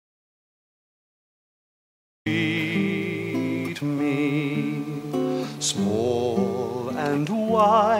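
The clip opens in an audio dropout to silence that is already under way at 0.00 s and lasts until 2.26 s. For those first seconds the signal is silent, with no room tone or noise floor beneath it, and the sound then starts abruptly, as if cut in mid-flow. The likely cause is a lost input, such as a disconnected device, a failed link or a mute, while recording continued and wrote empty samples. Whatever occurred during that stretch was not captured.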